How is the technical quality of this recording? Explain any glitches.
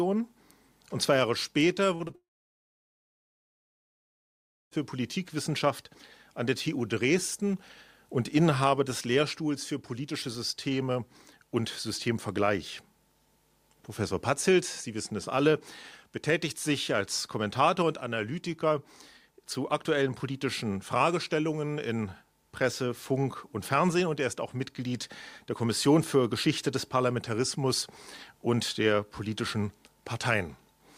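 The recording has clear network-delivery glitches clustered near the start.

Short concealed packet loss at 1.95–2.02 s, 2.08–2.11 s and 2.11–2.15 s: missing audio was patched by extending the preceding sound, heard as brief smears or wobbles.

Long network dropout from 2.15 to 4.73 s, likely a stall in arriving data: the sound trails off, about 2.5 s of silence follows, and audio resumes with that stretch gone.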